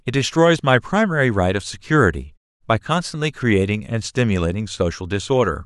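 No technical faults can be heard anywhere in this speech clip.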